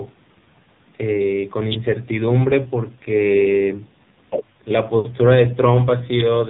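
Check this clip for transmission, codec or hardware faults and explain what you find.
One fault runs through the whole clip: AMR narrowband mobile codec coding. Nothing above 4 kHz survives, and the speech sounds heavily buzzy and synthetic. This fits AMR-NB in a low mode near 5.9 kbps, where a few pulses per subframe drive a vocal-tract model.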